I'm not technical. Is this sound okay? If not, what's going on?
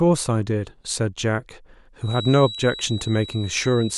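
No. From 2.0 seconds to the end of the speech, a thin, steady whistle sits behind the talking at about 3.9 kHz, quieter than the voice and swelling and fading slowly. This is a feedback whistle, likely caused by sound from a loudspeaker leaking back into the microphone and circling just short of howling.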